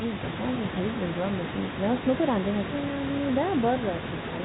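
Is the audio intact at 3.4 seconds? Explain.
Yes, the audio is intact at 3.4 seconds, with no dropout, click or other fault at that moment.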